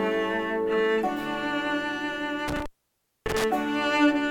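At 2.48 s an intermittent contact fault begins. It lasts until 3.44 s. A loose cable or plug briefly breaks the signal path. The sound cuts out for about 600 ms. Crackle marks both edges of the gap. Faint hiss remains inside it.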